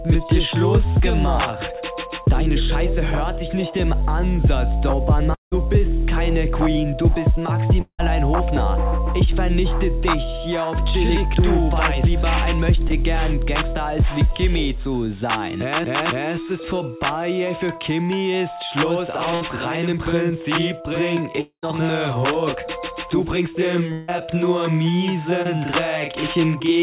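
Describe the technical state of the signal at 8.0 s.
Around 8.0 s the stream is in a gap, most likely a long network dropout, running from 7.82 to 8.01 s. For about 180 ms no audio reached the receiver, so it stretched the last sound it had into roughly 170 ms of fading buzz that falls away to about 80 ms of silence. The audio then resumes with that stretch missing. The surrounding band stays capped at 4 kHz by the G.711 mu-law call codec.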